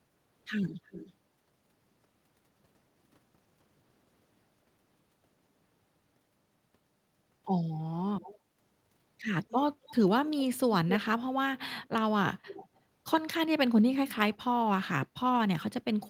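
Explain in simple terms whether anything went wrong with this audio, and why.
There is an echo leak. Brief, faint repeats of the speech come back about a quarter-second late, at 0.9, 8.2, 9.5, 9.9, 11.8 and 12.5 seconds. The likely cause is a speakerphone whose echo cancelling missed some sound.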